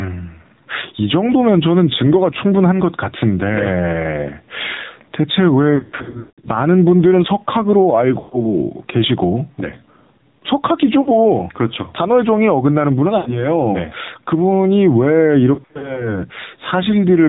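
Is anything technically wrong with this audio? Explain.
Yes. Three faults are audible.

Gain pumping runs throughout. The gain is pulled down by about 5 decibels on loud sounds, so loud and soft parts sit closer in level and the sound is squashed, likely from a fast limiter.

The AMR narrowband mobile codec also affects the whole clip. It sounds buzzy and synthetic, which fits a low bitrate around 7.4 kbps. A spectrogram shows nothing above 4 kHz.

Lost AMR speech frames occur at 5.76–6.49, 8.20–8.54, 11.02–11.09, 13.18–13.48 and 15.54–16.12 s. The decoder repeats stale settings with falling gain, so the sound warbles, drags and fades. The first event is the worst, with gaps up to 0.18 s. These appear as smeared, fading patches in the spectrogram.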